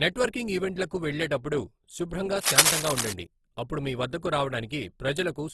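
Throughout the speech, the sound is grainy and rough, with plainly audible coding damage. Nothing is present above about 12.1 kHz. This is likely Opus compression in its music mode. At a low rate, around 16 kbps, the encoder keeps each band's energy but fills missing detail with folded or noisy content. So instead of swirling, the voice takes on a hiss-like, sandy texture. The top end is cut off cleanly at the super-wideband limit.

From 1.78 to 1.90 s, just after "నెట్వర్కింగ్ ఈవెంట్లకు వెళ్ళేటప్పుడు", one channel drops out for about 0.13 s. The level falls abruptly by about 6 dB, then returns. This fits the likely loss of one stereo channel: when the two sides are summed, the shared speech drops to half its amplitude. It is heard as a brief, sudden dip in loudness, like a quick duck in volume.

From 2.39 to 3.13 s, after "నెట్వర్కింగ్ ఈవెంట్లకు వెళ్ళేటప్పుడు శుభ్రంగా" and before "అప్పుడు మీవద్దకు", cable scratch noise sits over the speech. 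It comes as dense, uneven bursts of crackle, a little louder than the voice itself. The cause is likely a worn cable or connector being moved, so its contact resistance flickers rapidly. It sounds like scratching and rustling for about three quarters of a second.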